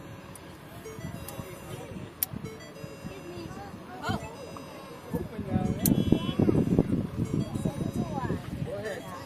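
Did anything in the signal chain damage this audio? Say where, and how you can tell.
No, nothing in the signal chain damaged this audio.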